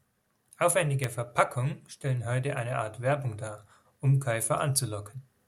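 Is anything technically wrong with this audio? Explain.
Yes. At 1.04 s there is a bit error spike: a single flipped bit knocked about three consecutive samples off by a power of two before they snapped back. It is heard as one sharp tick, reaching about -14 dBFS. On the waveform it shows as a lone needle, and on the spectrogram as a thin vertical line spanning all frequencies.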